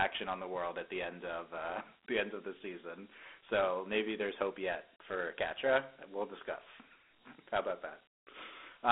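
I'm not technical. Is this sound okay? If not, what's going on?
No, it has a clear fault. From start to finish the speech sounds thin and boxed-in, like a phone menu or old voicemail, with a gritty hiss clinging to it. This is Dialogic VOX ADPCM, a phone-system recording format. It squeezes each moment of sound into very few steps, which leaves that rough grain, and it keeps only a narrow band from about 250 Hz to 3.6 kHz, with nothing above 3.9 kHz, so depth and crispness are gone.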